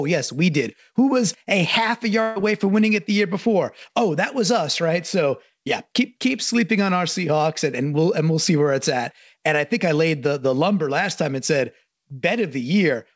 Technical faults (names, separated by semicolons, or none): burst of packet loss